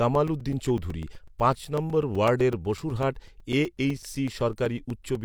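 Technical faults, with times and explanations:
0.15 to 5.16 s, periodic USB or driver dropouts: something in the system stalls the USB link or the audio driver every 0.125 s, eight times a second, and each stall loses a few milliseconds of the speech, which is replaced by silence. Because the gaps fall on a steady grid, they come through as an even train of ticks riding on the voice, heard only while sound is present and vanishing in pauses, about forty of them in all.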